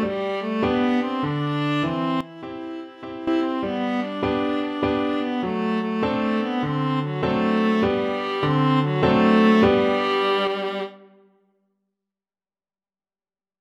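At 2.21 s the level drops abruptly by about 12 dB and stays down until 3.27 s, then snaps back; at 8.43 s it jumps up by about 4 dB until 10.47 s. Both are sudden gain jumps, likely a digital gain setting applied without a ramp. Unlike a compressor or automatic gain control, which would glide, each step lands instantly, and the background noise shifts by the same amount as the sound.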